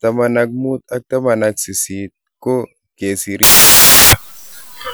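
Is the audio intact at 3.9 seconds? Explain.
No. From 3.43 s, right after "ko kagesiir", to the end the speech turns into loud, harsh broadband noise: samples built from the wrong bytes, with low-order bits read as the large part of each value. A spectrogram shows broadband fill; the waveform becomes dense hash.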